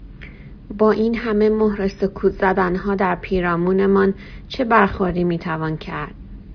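A short speech recording, and nothing technically wrong turns up anywhere in it.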